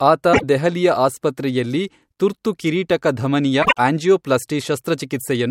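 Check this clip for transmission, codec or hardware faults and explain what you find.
Two short faults turn up in this speech clip, both frames out of order. The first is at 0.33 to 0.44 s, just before "ದೆಹಲಿಯ ಆಸ್ಪತ್ರೆಯಲ್ಲಿ ತುರ್ತು ಕಿರೀಟಕಧಮನಿಯ". The second is at 3.62 to 3.78 s, just after "ದೆಹಲಿಯ ಆಸ್ಪತ್ರೆಯಲ್ಲಿ ತುರ್ತು ಕಿರೀಟಕಧಮನಿಯ". In each one, two adjacent runs of coded audio were decoded in swapped order. The exchanged blocks are about 24 ms in the first and 48 ms in the second, which fits single-frame and two-frame swaps. Each stretch sounds like a brief garbled flutter. The timing stays intact, with no gap or lost time.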